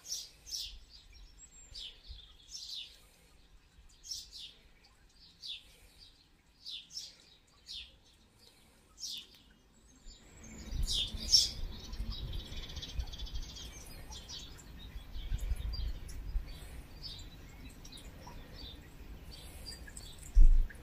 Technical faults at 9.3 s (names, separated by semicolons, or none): none